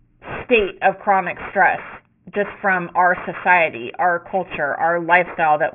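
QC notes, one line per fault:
Throughout, aliasing: sibilants sound gritty and metallic, with energy folding back around 3 kHz, which suggests an unfiltered downsample to 6 kHz. Aliased content sits about 15 dB below the speech.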